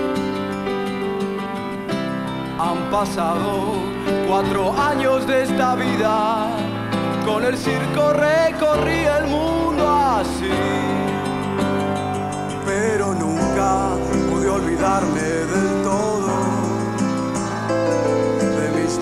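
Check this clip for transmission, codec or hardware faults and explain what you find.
Nothing wrong turns up here; the whole clip sounds steady and intact, with no glitches or trouble from the line, the encoding or the gear along the way.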